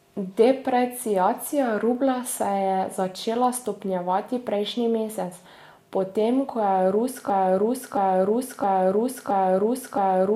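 Speech with a broken-record loop from 7.30 s to the end: a 0.67 s fragment repeats five times, likely from a stalled stream, appearing as identical tiled blocks on the spectrogram.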